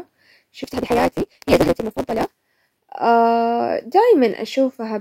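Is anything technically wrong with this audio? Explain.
Yes. From 0.63 to 2.35 s, a block size mismatch (truncated) drops each block's tail, buzzing at 172 Hz (consistent with 256-sample reads) and rushing the speech 1.88 times faster while keeping its timbre.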